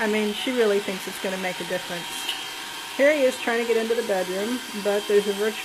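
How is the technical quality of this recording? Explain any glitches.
The quality is compromised at the start by one fault. From 0 to 4.0 s there is an adaptive stream starting at a low bitrate. The player opened on a low-bitrate version, likely around 20 kbit/s HE-AAC, giving synthetic-sounding treble and heavier artefacts. At 4.0 s it jumps seamlessly to a cleaner version reaching about 14.9 kHz, without the gap a dropout would leave.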